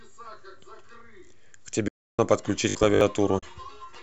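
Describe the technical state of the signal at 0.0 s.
At 0.0 s the speech signal is intact, with only the light coloration of what is likely low-delay AAC compression and no fault present.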